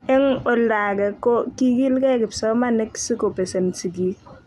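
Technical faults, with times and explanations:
Nothing stood out as a technical problem on listening to this speech recording.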